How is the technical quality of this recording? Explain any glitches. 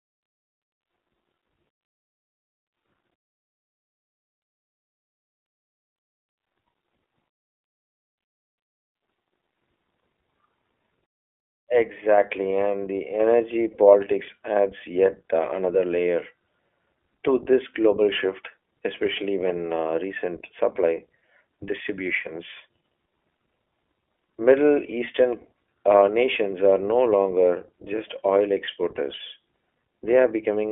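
The speech is degraded by iLBC codec coding across the whole recording. Only about 300 Hz to 3.4 kHz survives, and because each short frame, fitting 20 ms at a rate matching 15.2 kbps, is coded independently, the speech sounds plainly rough and synthetic. Plain telephone band-limiting would sound muffled but clean, without this buzzy, processed texture.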